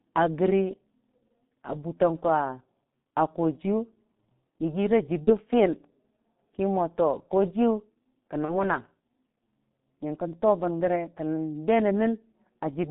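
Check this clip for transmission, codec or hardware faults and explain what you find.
The clip has two faults: the whole clip went through the G.723.1 codec, and two packet losses were concealed by that codec.

The G.723.1 codec affects the entire clip. This low-rate telephony coder models the voice in 30 ms frames, and here it runs at 6.3 kbit/s with heavy damage. The line passes only about 150 Hz to 3.7 kHz, so everything above that is gone. Because the voice model is refreshed only once per frame, the speech comes out muffled and hoarse, and the consonants smear into one another.

VoIP packet loss concealed by the speech codec occurs twice, from 5.24 to 5.33 s and from 8.45 to 8.53 s. Each gap fits a single lost 30 ms frame. The decoder filled the gap by extending the last pitch and filter settings while turning the gain down. As a result, the speech briefly stretches into a buzzy tone or a coloured noise that fades. 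Because each frame builds on the previous one, the voice stays weak or distorted for tens of milliseconds or more in each case before it recovers.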